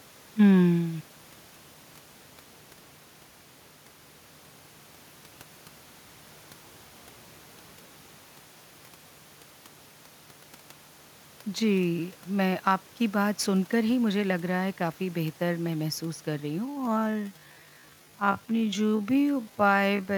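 Speech, with some room noise underneath and the talker's level shifting around 8 s as if they moved relative to the mic. The real problem is a time-stretched section from 16.63 s to the end at 20.18 s: the pace suddenly drops to roughly half speed (about 0.52x) while the pitch holds steady, so the speech drags. That's likely software stretching the tail to fill a length by repeating short slices of audio.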